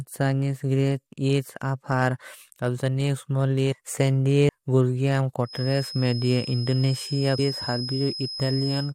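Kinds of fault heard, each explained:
Damaged data in a compressed stream: Part of the coded speech stream was corrupted, so the decoder misread the frames there, lost its place and had to hunt for the next valid frame header before it could carry on. Each time this produces a brief glitch in the speech, heard at 4.48 s and again at 7.38 s, each lasting only a moment.
Feedback whistle: A loudspeaker-to-microphone loop is likely sitting just at the edge of feedback, so a single frequency keeps recirculating without building into a full howl. From 5.42 s to the end of the clip, a thin, steady whistle at 5.1 kHz hangs behind the speech, roughly 10 dB below it, swelling and fading slowly in level instead of growing louder.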